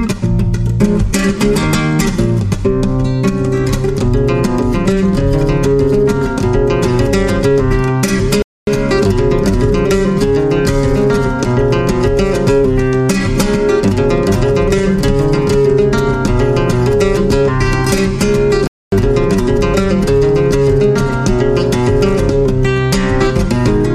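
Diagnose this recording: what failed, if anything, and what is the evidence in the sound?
Gap between chunks, from storage or playback: 250 ms of silence cuts in at 8.42 s and 18.67 s, 10 s apart, at the joins between 10 s chunks. No sound is lost. The waveform shows flat, hard-edged holes; the spectrogram shows blank full-height stripes.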